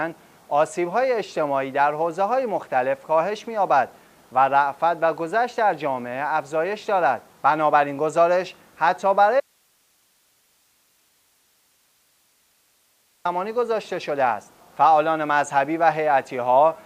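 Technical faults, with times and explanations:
9.40 to 13.25 s, audio dropout to a faint residue. The sound cuts abruptly for 3.85 s, leaving only faint hiss, roughly 40 dB down. Likely cause: the signal was lost while the path stayed live.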